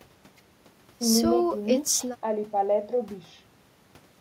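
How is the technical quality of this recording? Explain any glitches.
Nothing stood out as a glitch or technical problem on listening to this speech recording.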